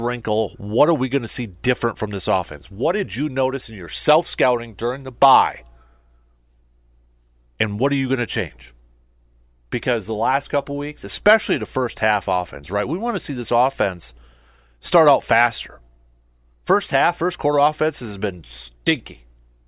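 A recording of speech with no technical faults to report. Nothing goes wrong at any point in the audio, so there are no times or causes to give.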